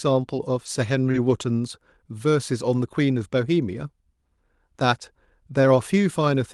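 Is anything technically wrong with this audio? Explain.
Yes. The speech has two kinds of network fault, all packed into the first 1.3 seconds.

Lost packet rebuilt from error correction occurs five times, each lasting 20 ms: at 0.65, 1.05, 1.14, 1.18 and 1.30 s. In each case a packet went missing, but the following packet carried a reduced-quality redundant copy, as Opus in-band forward error correction provides. The decoder played that copy, so there is no gap. Each patch sounds briefly coarser and noisier than the audio around it.

Short concealed packet loss occurs from 1.11 to 1.16 s. About 20 ms of audio arrived too late or not at all, and the receiver covered it with roughly 23 ms of synthesized signal. That fill extrapolates the preceding sound, using its pitch if it was voiced and shaped noise if not, then crossfades into the real stream. The result is a brief smear or wobble, overlapping the rebuilt packet at 1.14 s. 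Throughout the clip, the call codec's upper band stops near 12 kHz, which fits Opus at a moderate bitrate such as 48 kbps.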